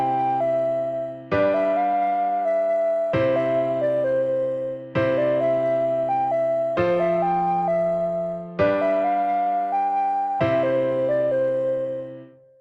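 Nothing stood out on listening, with no audible glitch, dropout or distortion at any point in the clip.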